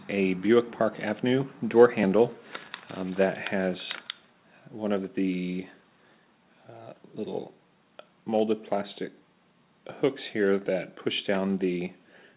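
No faults; the audio has come over a call path, with nothing above 4 kHz, which fits G.711 mu-law at 64 kbps.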